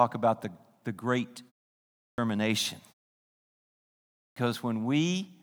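At 2.10 s, after a 0.67 s pause, and again at 4.28 s, after a 1.43 s pause, the speech shows a clipped start after a pause: the output device has idled through the silence and takes roughly 80 ms (about 80 and 83 ms) to wake, so each onset is cut off and the speech jumps in abruptly. On a waveform, the envelope rises from silence as a hard vertical edge. A spectrogram shows a sharp start with no soft initial energy.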